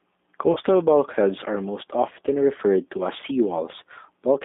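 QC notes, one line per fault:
Throughout: G.729 codec, the 8 kbit/s speech coder rebuilding the voice from a filter and sparse pulses, so it's plainly rough and synthetic, with a narrow 200 Hz to 3.6 kHz phone band.
0.53 to 0.59 s: VoIP packet loss concealed by the speech codec. About 30 ms went missing, which fits a single lost packet, and the decoder stretched the last sound into a fading, stretched-out fill just before "bulkheads are most often".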